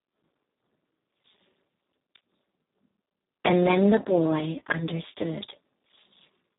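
Throughout, heavy Speex codec damage: starved CELP excitation makes the speech hoarse, noisy and robotic, pointing to roughly 4 kbps, with nothing above 3.8 kHz.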